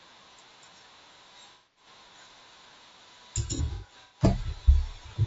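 Throughout the speech there is a rough, grainy texture, with noise filling the gaps between pitch harmonics and a thin, synthetic-sounding top band. This is low-delay AAC compression, likely AAC-ELD, whose short frames resolve harmonics poorly and fit a rate near 32 kbps.

From 1.52 to 1.86 s there is AAC frame loss with concealment. About 240 ms of audio is missing, and the decoder rebuilds it from the last good spectrum, leaving a smeared, noisy patch. From 3.47 to 4.21 s, about 330 ms is lost in scattered gaps, the longest around a tenth of a second, producing repeated phasey, blurred dropouts.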